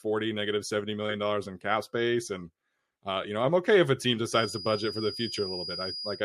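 From 4.25 s, right after "okay if a team", a feedback whistle at 4.9 kHz sits about 10 dB below the speech until the end. It is a thin, steady tone that swells and fades slowly in level, likely from a loudspeaker-to-microphone loop held just short of runaway.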